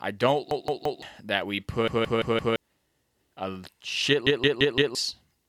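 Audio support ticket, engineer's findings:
Repeated buffer at 0.51–1.02 s, 1.88–2.56 s and 4.27–4.95 s: a 171 ms chunk replays 3–4 times with hard joins, which fits an 8192-sample playback buffer underrun. The copies are identical, not a decaying echo.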